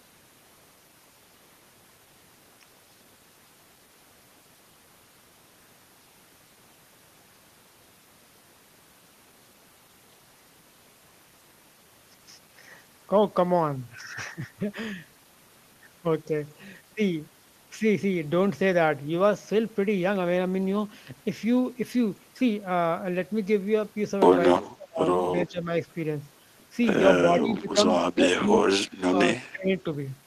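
From 24.64 to 25.01 s, 25.47 s, 27.39 s, 28.11 s, 29.1 s and 29.52 s, the speech dips by roughly 10 to 25 dB for brief stretches, likely speech suppressed in double talk, where the echo canceller could not separate the talker from the overlapping loudspeaker echo and attenuated the talker.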